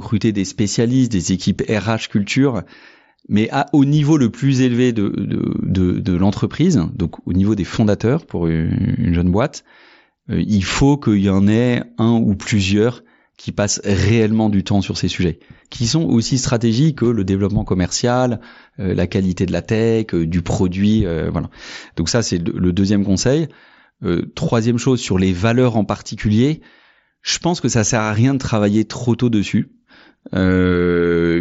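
No technical faults are audible in this speech recording.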